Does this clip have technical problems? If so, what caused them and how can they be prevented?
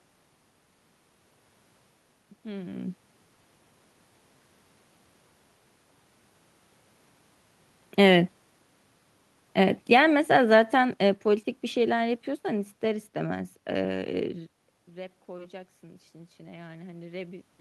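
Yes. From 9.58 to 13.1 s, automatic gain falling: the gain control judged the input too loud or its background noise too strong and reduced its gain by about 8 dB over several seconds, so the voice and the room noise behind it sink together rather than the level holding steady. Using a slower, gentler gain control, or fixing the input gain at a sensible level, would prevent this.

From 14.94 s to the end of the clip, automatic gain rising: after the talker moves away at around 14.5 s and the input drops by about 17 dB, the gain control pushes its gain back up gradually, so voice and background noise swell together over a couple of seconds. Keeping a consistent distance from the microphone, or limiting how far and how fast the gain control may boost, would prevent this.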